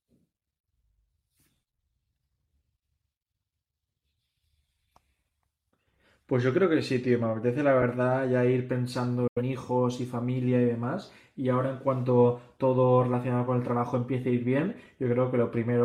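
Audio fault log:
9.27–9.42 s, digital broadcast dropout: speech fades within 8 ms to silence while the receiver mutes failed frames, fitting two lost; flat waveform, blank spectrogram column.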